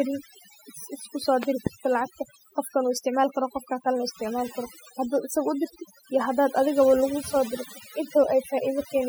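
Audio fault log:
Throughout: overdone noise removal. The noise reducer is set so hard that bands sitting near its noise estimate are pulled down or gated out entirely, taking the quieter parts of the speech with them. The background drops and breaks up into twinkling specks.
1.43 to 1.69 s: loud pop. Just after "isku so", two sharp pops land on top of the speech, which continues underneath. They peak well above the speech level, roughly 15 dB over it, and sound like a sudden voltage step, likely from a plug, switch or static discharge.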